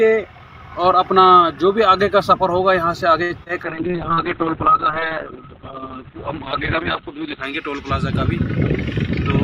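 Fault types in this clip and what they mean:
Short stall from a late packet: the last sound is held for about 63 ms, then resumes from the same place, so nothing is lost, unlike concealed loss.
Short concealed packet loss: two back-to-back 20 ms gaps near 3.44 s are filled by continuing the prior sound, so real audio is missing and a brief smear results.
Call bitrate drop: the encoder falls from 64 to 6 kbps and bandwidth narrows from 20 kHz to 4 kHz, giving sustained muffled, coarse sound for several seconds rather than a brief glitch.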